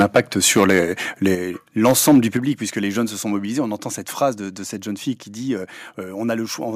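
From 0.0 to 0.79 s, and again from 1.85 to 2.19 s, the speech shows microphone overload: harsh, crackly peaks, likely from input gain driving the converter about 11 dB and then about 5 dB past full scale. The waveform shows flat-topped peaks on a few percent of samples, and the spectrogram shows broadband smear above them. The microphone volume is stepped down three times, each an abrupt level drop of voice and background, likely from the software cutting input gain after clipping: at 0.02 s by about 4 dB, at 1.35 s by about 6 dB, and at 2.37 s by about 7 dB, just before "puisque les jeunes se". On the waveform, each appears as a sudden shrink in the envelope.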